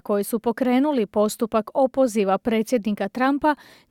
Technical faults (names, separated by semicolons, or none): none